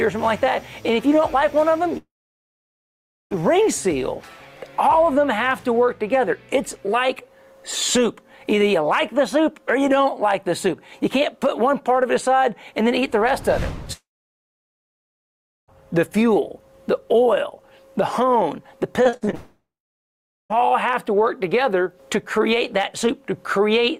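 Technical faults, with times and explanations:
1.97 to 3.33 s, long network dropout: the sound trails off into a brief fading buzz, then about 1.2 s of silence, likely from audio that never arrived.
13.93 to 15.70 s, long network dropout: about 1.8 s is lost. A short fading continuation gives way to roughly 1.6 s of silence, likely from a stalled stream.
19.04 to 19.35 s, repeated packet loss (robotic sound): five gaps, none longer than 45 ms, are patched by stretching the preceding sound. About 42% of this stretch is filled in, so it sounds choppy.
19.35 to 20.55 s, long network dropout: right after the choppy stretch, about 1.2 s drops out. A fading fill gives way to about 0.8 s of silence, likely from packets that stopped arriving entirely.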